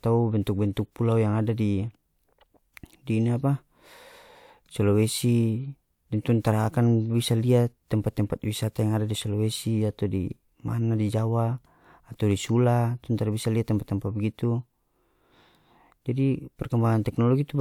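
No technical faults turn up anywhere in the recording, so there is nothing to describe in time order.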